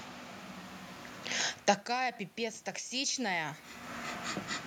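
From 1.86 to 3.63 s you get automatic gain rising: after the talker moves back around a second and a half and the level drops by about 24 dB, the AGC slowly adds about 4 dB, so the voice and room noise swell together.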